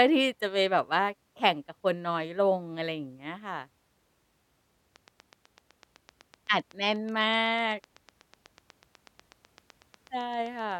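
From 4.96 s to 10.73 s a steady ticking runs over the speech, about eight sharp clicks per second at an even pace, some fifty in all, each roughly as loud as the talker and plainly audible in the pauses too. This is a train of clicks: near-identical short pulses added on top of the signal at a fixed rate, likely from electrical interference by nearby equipment or a faulty connection or power supply.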